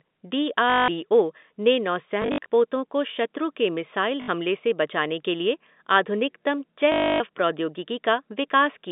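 Speech carried over a G.711 telephone line, band-limited to about 200 Hz–3.7 kHz, with packet loss with last packet repeated at 0.7–0.88 s, 2.22–2.46 s (scattered), 4.22–4.28 s and 6.92–7.2 s. The receiver replays the previous packet to fill each gap, which causes robotic stutters that buzz at 50 Hz, consistent with 20 ms packets.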